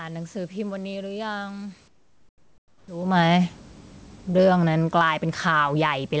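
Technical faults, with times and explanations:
1.88–2.88 s, comfort noise in place of the background: for one second the room's actual background gives way to a steady, featureless hiss about 11 dB quieter, likely because discontinuous transmission stopped sending during the pause and the receiver synthesised noise roughly matching the background's spectrum.
4.25–6.20 s, automatic gain falling: the automatic gain control judged the input too loud or its background noise too strong and progressively reduced its gain, so the sound sinks steadily toward the end of the clip, with the room background dropping by the same amount rather than staying at its earlier level.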